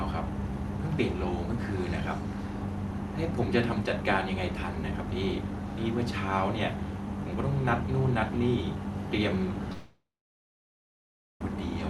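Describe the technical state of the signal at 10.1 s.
At 10.1 s the signal sits inside a long network dropout running from 9.72 s to 11.41 s, likely caused by audio packets failing to arrive. From 9.72 s the receiver extends the last sound as a fading buzz or hiss. That concealment runs out after roughly a third of a second, so by 10.1 s the output is near silence. About 1.68 s of material is lost. When the sound returns at 11.41 s, it skips that gap.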